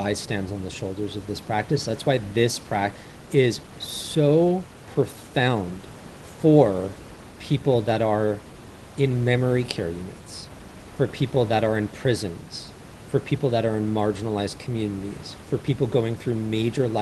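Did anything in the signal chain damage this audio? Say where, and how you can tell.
Yes. At the network and jitter-buffer stage, a skip ahead occurs at 2.95 s: roughly 0.7 s of speech is missing, with no fill, and the audio on either side is spliced almost directly. A stretch was dropped, in transit or by the overflowing buffer, while newer audio was already queued.

Two jitter buffer speed-up passages follow, 3.05–4.16 s at 109% speed and 4.88–5.86 s at 114%. The speech sounds hurried but keeps its pitch, because the receiver repeatedly cut short pitch-period segments, about 0.1 s and 0.15 s in total, to shrink excess buffered delay.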